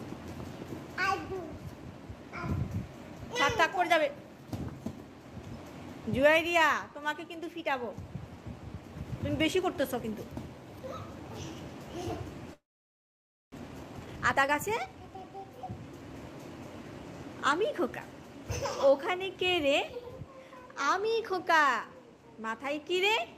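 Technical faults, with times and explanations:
12.53 to 13.56 s, long network dropout: the sound breaks off and the last fragment is stretched into a fading buzz that soon sinks to near silence. When audio resumes, about 600 ms is missing for good, likely because packets were lost in transit.
13.57 to 15.73 s, jitter buffer speed-up: the returning audio plays at 118% speed with unchanged pitch and sounds hurried. The receiver repeatedly cuts short pitch-period slices to shed the backlog that piled up after the gap, roughly 400 ms in total.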